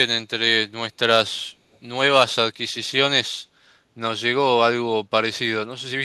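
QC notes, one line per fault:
1.72–1.78 s, echo leak: a faint copy of the speech, about 40 dB down, returns 0.45 s late, likely past an incomplete echo canceller; the spectrogram shows weak, briefly repeated harmonics.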